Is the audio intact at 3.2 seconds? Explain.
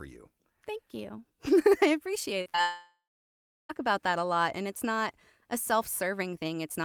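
No. At 3.2 seconds the speech sits inside a long network dropout running from 2.61 to 3.71 s. The last sound before the gap is stretched into a buzzy, fading continuation. After a few tenths of a second it dies away, and about 0.71 s of near silence follows. The cause is likely a stall in incoming audio, with the receiver filling the hole itself. About 1.08 s of speech never plays, and the speech resumes later without it.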